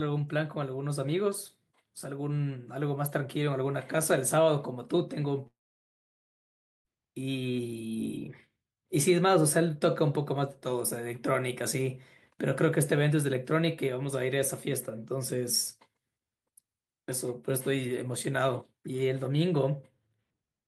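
From 5.47 to 6.87 s, a long network dropout likely cut off the incoming audio, losing about 1.38 s of speech. The last sound smears briefly into a fading buzz, then about 1.32 s of silence follows before speech resumes with that stretch gone.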